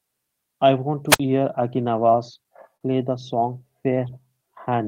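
A wireless microphone squelch dropout occurs from 1.09 to 1.20 s. The radio signal fades, hiss briefly rises, and then the receiver's squelch mutes the output for about 56 ms. The speech returns after this gap of near silence.

A short stall from a late packet follows at 2.77 to 2.83 s. The packet missed its slot and the jitter buffer ran dry, so the receiver held the last sound for 40 ms. Nothing is lost, but one sound lingers too long, and the delay increases by 40 ms.

A jitter buffer slow-down runs from 4.07 to 4.87 s, to the end. The receiver builds up its reserve by repeating pitch periods and bits of pauses, adding 58 ms. Speech plays at 94% speed with unchanged pitch, so sounds are drawn out.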